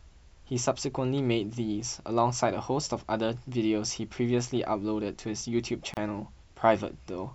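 At 5.94–5.97 s the speech breaks for 31 ms, soft-edged, then resumes: a gap at a join of encoded pieces, with encoder padding left untrimmed.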